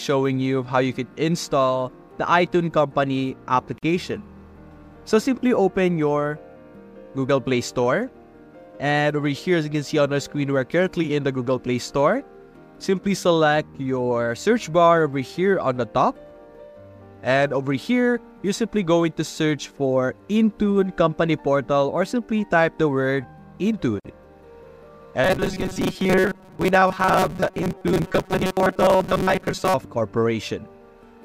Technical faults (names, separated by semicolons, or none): gap at a join of encoded pieces; robotic sound from repeated short buffers